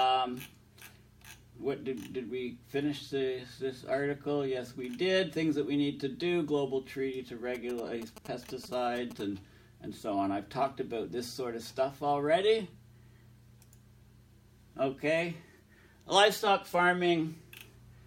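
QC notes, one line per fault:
7.55–9.21 s, GSM signalling bursts: a nearby 2G phone's radio bursts are being rectified by the audio circuit during signalling, so a galloping dit-dit-dit of short 217 Hz buzzes sits roughly 15 dB below the sound.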